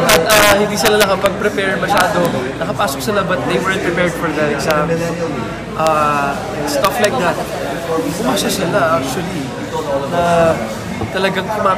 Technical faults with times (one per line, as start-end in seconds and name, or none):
0.09-1.26 integer overflow
1.98-2.25 integer overflow
4.71 integer overflow
5.87 integer overflow
6.85-7.05 integer overflow